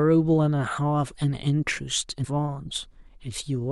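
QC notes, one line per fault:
2.23–2.25 s, damaged data in a compressed stream: a brief glitch cuts through the speech for about 22 ms where corrupted bytes made the decoder misread the frames and lose sync until it found a valid frame header again. On a waveform the signal breaks for a moment, unlike the speech around it. A spectrogram shows a narrow vertical disturbance with hard edges at both ends.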